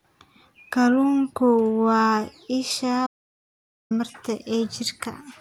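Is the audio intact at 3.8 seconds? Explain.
No. At 3.8 seconds the speech is inside an audio dropout to silence that runs from 3.07 to 3.91 s. The sound cuts off abruptly mid-flow, leaving complete silence with no room tone underneath, and then resumes just as suddenly, so about 0.84 s of speech is simply gone. The likely cause is a brief loss of the input signal, such as a disconnected device, a failed link or a stray mute, while recording continued to write silence.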